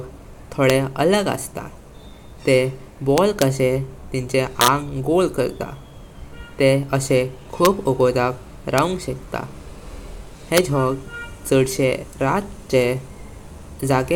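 A speech clip with integer overflow cracking on the loud peaks: single sharp cracks at 0.70, 7.65, 8.78 and 10.57 seconds, plus longer bursts from 3.18 to 3.42 and from 4.61 to 4.68 seconds. The level only goes about 0 to 2 dB past full scale, but instead of clamping, the samples wrap around to the opposite extreme, so each overshoot jumps across the whole range and you get a harsh crack far nastier than ordinary clipping.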